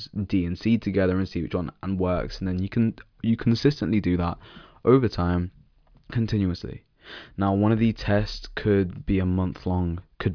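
No technical faults can be heard anywhere in the recording; the signal stays continuous and intact throughout.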